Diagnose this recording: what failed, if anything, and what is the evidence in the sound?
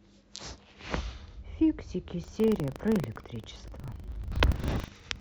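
The trouble is at the driver/buffer stage: buffer tearing. From 2.2 s to the end, the speech picks up a steady robotic rattle at about 25 Hz, and it's only there while someone's talking. That rate points to a period of roughly 40 ms. The app writing the ring buffer and the hardware reading it have drifted into each other, so each period carries a small slice of audio about 70 ms stale, with hard joins on both sides.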